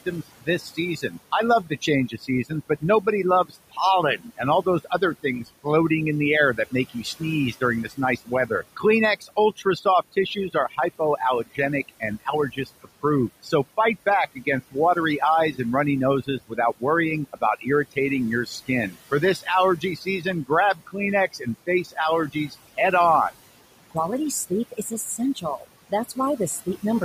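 Right from the start there's overdone noise removal. The denoiser is set so hard that bands sitting near its noise estimate get pushed almost to nothing, so the gaps go nearly silent with little twinkling specks. The room noise, about 19 dB under the speech, is what it's chewing on.

Running throughout as well are noise suppressor artifacts. The suppressor pulls the steady noise down by about 16 dB between words, but it climbs back up under the speech, as the gain keeps shifting frame by frame.

Then there's speech cut by the noise suppressor, where it mistakes parts of the speech for noise:
0.06 to 5.66 s, up to about 17 dB down, about a second of sound lost in total, ending just before "in the air".
6.56 to 13.78 s, starting right after "in the air", up to about 18 dB, again around a second in total.
14.35 to 15.59 s, just before "and runny", a short bit of roughly 150 ms at about 14 dB.
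16.24 to 22.78 s, about 16 dB, around a second in total.
24.5 to 26.83 s, about 18 dB, a few hundred milliseconds in total.

In each stretch, parts of the speech sound swallowed or faint.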